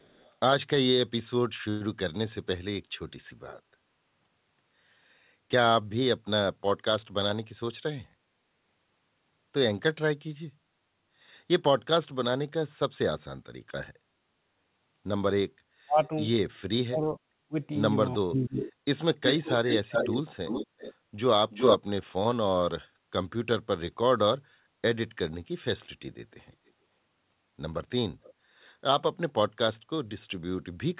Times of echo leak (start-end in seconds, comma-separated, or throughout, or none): 0.00-0.32, 18.59-18.73, 19.25-20.95, 21.50-21.79, 28.23-28.34